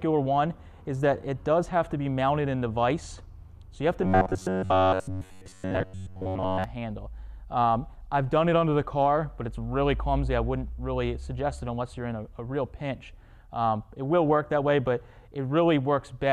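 From 4.02 to 6.64 s the sound turns rigid and metallic, as if pushed through a buzzing tube, with a fixed pitch near 93.8 Hz riding over it while the rough contour still comes through. This is robotic sound from repeated short buffers, likely caused by new audio arriving too slowly, so the playback loops a slice of about 10.7 ms over and over, covering most of the span and skipping the real material underneath.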